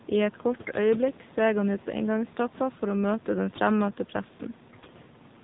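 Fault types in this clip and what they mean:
AMR narrowband mobile codec: the whole clip went through the 2G/3G speech codec at 7.4 kbps, so nothing above 4 kHz survives and the voice sounds buzzy and synthetic.
AMR bit errors: flipped bits in weakly protected parts of the codec frames. The pitch and level hold, but the voice turns hoarse and gargly for about 0.19 s at 0.62 and 4.72 s.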